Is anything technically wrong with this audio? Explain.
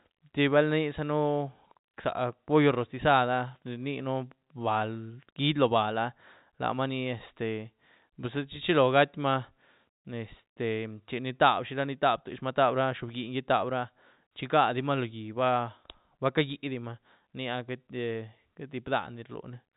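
No, nothing in this speech is technically wrong; it carries the narrow, telephone-band character of G.711 coding, with nothing above about 4 kHz, as a normal property of that format rather than a fault.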